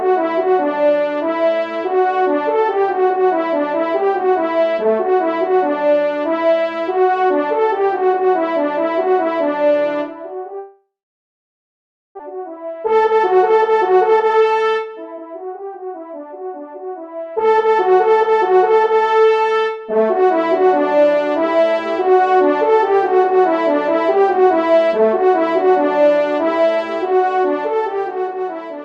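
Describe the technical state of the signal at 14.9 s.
At 14.9 s the signal is inside a jitter buffer speed-up that runs from 12.30 to 16.19 s. The receiver's buffer had built up more audio than its target. To drain that backlog, it cut out many short slices, each one or a few pitch periods long. About half a second is removed across the stretch. Playback runs at roughly 114% speed with the pitch unchanged. The sound therefore seems rushed through this section.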